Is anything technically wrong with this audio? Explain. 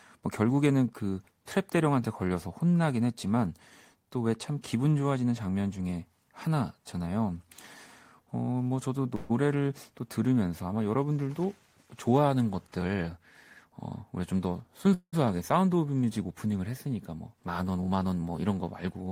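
Yes. There are two call audio freezes and one jitter buffer speed-up in this speech.

At 9.15 to 9.32 s there is a call audio freeze. The last sound is held on as a short buzzy continuation for about 142 ms, and then the speech resumes where it left off. Nothing is lost, but playback is now about 142 ms later. The likely cause is delayed packets draining the jitter buffer. A second freeze runs from 14.94 to 15.26 s. About 189 ms is filled, ending in roughly 70 ms of silence before the audio returns, and the delay grows by about 189 ms.

From 13.17 to 14.93 s there is a jitter buffer speed-up. The receiver trimmed many short pitch-period pieces, around 150 ms in total, to reduce excess buffered audio. Playback runs at about 107% speed with unchanged pitch, so the speech sounds slightly hurried over that stretch.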